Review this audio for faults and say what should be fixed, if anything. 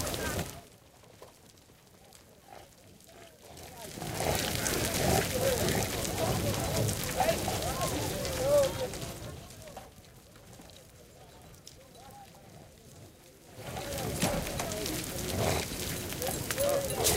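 Zipper noise from 0.34 to 0.77 s: a gain drop of roughly 25 dB was applied in unsmoothed 5 dB jumps, around ten per second. Each jump puts a small click into the sound, heard as a ticking zip riding on the fade. Ramping the gain sample by sample, or interpolating it across each buffer, would prevent this.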